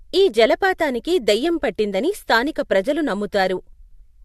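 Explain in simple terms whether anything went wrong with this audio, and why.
Nothing went wrong with this audio, as there is no fault to be heard anywhere in it.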